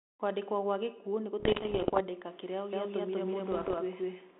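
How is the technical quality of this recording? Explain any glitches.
The recording is telephone-band speech, limited to roughly 250 Hz to 3.6 kHz with the light graininess of an ADPCM codec. It has two kinds of glitch.

Bit errors on an ADPCM link occur from 1.40 to 2.01 s, just after "gwa gĩkuũ nĩ", and again more lightly from 3.52 to 3.75 s. Flipped bits corrupt the decoder's adaptive step size and predictor, so each error keeps ringing for some milliseconds instead of staying a single click. The first stretch is the denser one and sounds like pops and rough, crackly bursts with brief jumps in level. The second is sparser.

A doubled audio track runs from 2.73 s to the end. A full-band second copy of the speech enters abruptly at about the same loudness, trailing by around 200 ms. This is most likely a second, slower capture path mixed in with the first. It has no decay or room colour, so it sounds like a hard, overlapping repeat rather than an echo.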